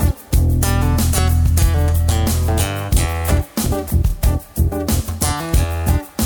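At 4.09 to 4.12 s there are repeated frames. A 26.1 ms block of the compressed stream is played twice in a row, which points to a single frame being written or delivered twice before decoding. The decoder faithfully renders the duplicate, so the same sliver of sound recurs immediately. It is heard as a brief stutter or hiccup, and everything after it arrives 26.1 ms later than it should, lengthening the audio by that amount.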